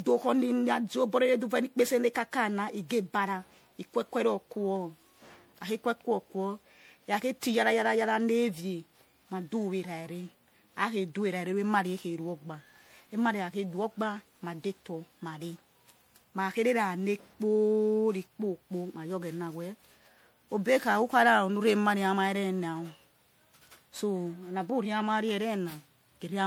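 Speech that sounds swirly, hollow and smeared throughout, with consonant attacks blurred and nothing above 20.8 kHz. This is generation loss, likely from repeated MP3 passes, around seven, each re-quantising on a shifted frame grid so artefacts pile up beyond what a 96 kbit/s rate alone explains.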